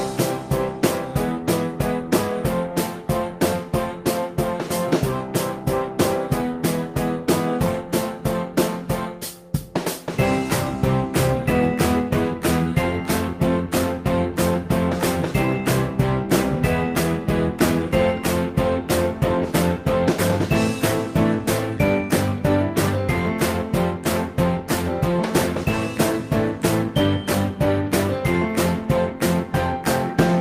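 There are no technical faults to describe at any point in the audio.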